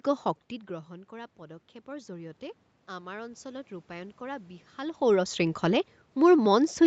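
From 0.68 s to 5.07 s the automatic gain is rising: the talker has backed off, dropping the level about 16 dB, and the gain control slowly adds about 6 dB. Voice and room noise swell together, visible as a waveform envelope and noise floor creeping upward across the spectrogram.

At 5.02 s, as the talker comes close again, the automatic gain starts falling and continues to the end. The voice arrives loud, then sinks together with its background. The waveform peaks start tall and taper, and the whole spectrogram, with nothing above 8 kHz, dims evenly.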